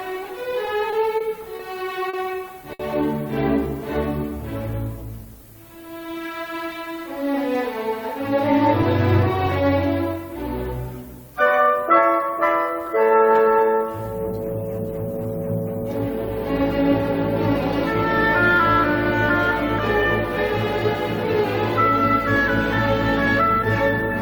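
A steady, thin hiss sits roughly 30 dB below the audio throughout, climbing sharply toward the top of the band. This is low bit depth with noise shaping, consistent with about 9-bit quantisation, and the upward tilt separates it from flat broadband noise. Between 0.65 and 2.81 s, repeated stalls (stutter) make the audio drag in six short held-over gaps, the longest 60 ms. It differs from dropouts because nothing is missing; the sound is only stretched by late-arriving packets.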